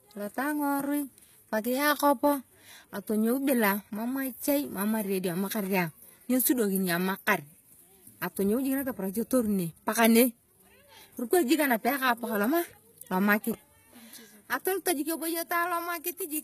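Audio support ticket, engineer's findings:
Throughout: gritty, lispy sibilants, synthetic treble, nothing above 14.9 kHz. Likely HE-AAC compression, fits about 20 kbps; band replication copies lower bands upward, harmonics misaligned.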